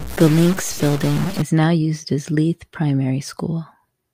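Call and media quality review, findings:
Harsh buzzy distortion 0.0–1.42 s, clearing before "now used as"; likely stuck bit (converter/data line). Waveform shows offsets of around -25 dBFS on about half the samples; spectrogram shows a broadband noise floor in pauses.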